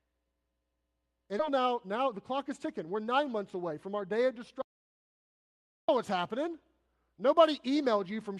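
Skip ahead at 1.39 s: the playback lurches forward with no gap, because a stretch of speech roughly 0.4 s long was thrown away, either lost in transit or discarded by the jitter buffer when it overflowed while newer audio was already queued. The speech on either side of the cut is spliced almost directly together, so part of what was said simply vanishes and the delay through the call drops by about the same amount.

Jitter buffer speed-up from 1.50 to 4.09 s: right after the jump, the speech runs at about 107 percent speed with its pitch unchanged. The receiver was holding more audio than its target, so it trimmed short slices of one or a few pitch periods again and again, removing roughly a fifth of a second in total. The talking sounds hurried rather than higher in pitch.

Audio dropout to silence from 4.62 to 5.89 s: the sound cuts off mid-flow and leaves 1.27 s of silence, with no room tone underneath, until speech returns on "what's happening". 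Silence was written through the gap, most likely because the audio input was briefly lost, and whatever was said in that time is gone. Across the clip the audio has the band-limited character of an Opus call path, with content reaching only to 12 kHz, which fits a bitrate of around 32 kbps.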